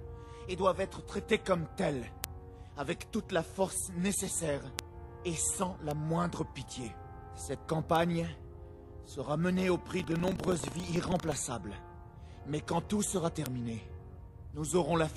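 First up are bit error spikes at 2.24, 4.79, 5.91 and 7.96 s. Each is a lone sharp tick, over in a sample or a few, and broadband with no tie to what's playing. That points to a single flipped bit somewhere in memory or on a digital link. The sample value leaps by a power of two and snaps straight back, so you get a click rather than a dropout.

From 9.96 to 11.39 s there's buffer tearing: a robotic rattle at 25 Hz, which fits a 40 ms buffer period, riding on the sound only while there's signal. The writer and the hardware reader of the ring buffer have drifted so they cross mid-period. A small slice of each buffer ends up holding audio from roughly 150 ms earlier, hard-joined on both ends, and that repeating seam is the buzz.

Then one more bit error spike at 13.46 s, the same single clean tick as the earlier ones.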